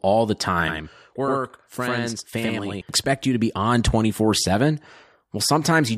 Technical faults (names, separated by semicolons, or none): channel delay (doubling)